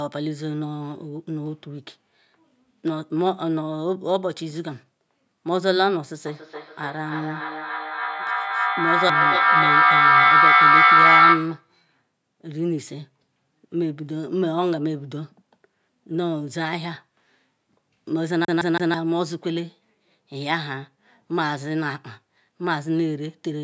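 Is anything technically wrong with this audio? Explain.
Yes, there are two faults in this speech clip.

From 6.26 to 11.76 s there is feedback echo between two devices. Two devices on the same call are in one room. One plays back what the other's microphone sent, and that microphone picks it up again. Each device's echo canceller only removes its own playback, so the sound circulates. Repeats arrive at a fixed interval of about 0.3 s, each thinner and more ringing. The loop is loud enough that they pile up, peaking at about 9 dB above the speech.

From 18.45 to 18.94 s the audio behaves like a CD stuck on one turn. A scratch knocks the laser back to the same spot on each revolution, so one 0.16 s segment plays three times in quick succession. Each jump leaves a brief mute, giving the fast, even stutter of a skipping disc rather than a natural pause or repeat.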